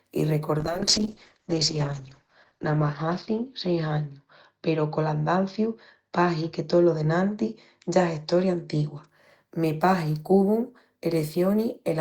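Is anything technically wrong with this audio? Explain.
Yes. A call bitrate drop runs from 0.58 to 9.13 s. The encoder was starved of bits, which fits a fall from about 32 to 8 kbps. Audio above 8 kHz vanishes, so the speech turns muffled and rough, worst for 1.96 s.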